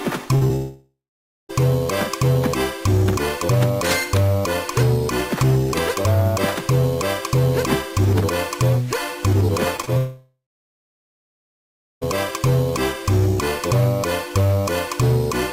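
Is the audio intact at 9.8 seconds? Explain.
No. Around 9.8 seconds the sound briefly smears and wobbles across three closely spaced moments: 9.77 to 9.80 s, 9.82 to 9.85 s, and 9.85 to 9.89 s. This is short concealed packet loss. Each time, about 20 ms of audio arrived too late to decode, and the receiver filled the gap by extending the preceding sound before blending back into the real signal.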